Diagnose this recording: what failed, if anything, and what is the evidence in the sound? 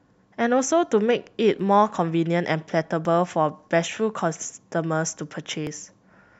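The speech has three jumps in the sound, at 1.60 s, 3.05 s and 5.67 s. Each is a likely dropped buffer (overrun) at the driver or buffer stage: a few milliseconds lost, roughly 15 ms at 3.05 s, spliced without any silence.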